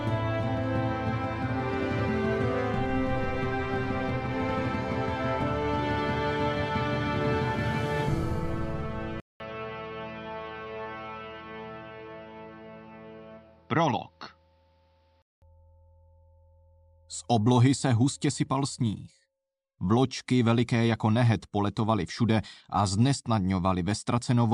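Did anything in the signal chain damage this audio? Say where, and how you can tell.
Yes. From 9.2 s to 15.42 s the audio turns dull and boxy, with nothing above 6 kHz, a level about 5 dB lower, and a different background noise roughly 45 dB below the signal. A 200 ms silence marks the switch. This points to the input stage, most likely an input switched to a poorer device: the capture path moved to a narrower-band microphone or headset profile with its own tone, gain and noise, then switched back.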